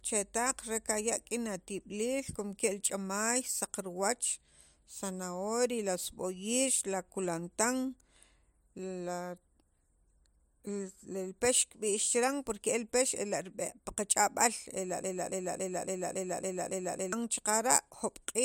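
A broken-record loop runs from 15.04 to 17.13 s in this speech clip: one fragment about 0.28 s long repeats exactly, back to back, seven times, so a short stutter of sound recurs with a steady, mechanical rhythm. The likely cause is a stalled player, encoder or stream that kept resending the last piece it held, and whatever speech belonged in those two seconds is lost.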